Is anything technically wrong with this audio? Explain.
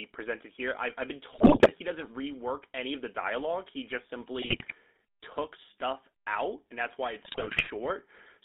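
Yes, the whole clip has gone through a GSM full-rate codec: the band runs only from about 250 Hz to 3.7 kHz, and the pulse-driven vocal-tract model leaves the speech buzzy and gravelly, which fits a 13 kbps stream.

There are also three bursts of GSM bit errors, where corrupted filter, pitch and gain values bend the spectrum and spike the level, so the speech breaks into squawks and gargling. The first runs from 1.32 to 1.71 s, between "here I I've been" and "he doesn't rework any". The second runs from 4.42 to 4.73 s, just before "took stuff out and". The third runs from 7.24 to 7.69 s, right after "out and that's why".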